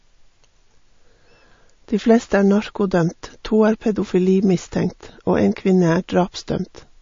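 From start to finish the speech sounds watery and swirly, with chirpy, metallic sibilants and nothing above 7.2 kHz. This is likely MP3 compression starved of bits, which fits a low bitrate near 34 kbps: the encoder cut the treble and let weak frequency lines flicker between frames.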